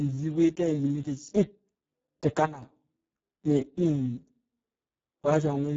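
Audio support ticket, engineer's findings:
Speex codec, whole clip: speech hoarse, noisy, near-robotic from starved CELP excitation. Damage level points to a bitrate around 6 kbps. Nothing above 7.6 kHz; the region above 4 kHz is only shaped noise fill, not real detail.

Sudden gain jump, 2.45 to 2.62 s: level drops about 12 dB in a single step, speech and background noise together, with no ramp. Likely a gain setting or bit shift applied mid-stream without smoothing.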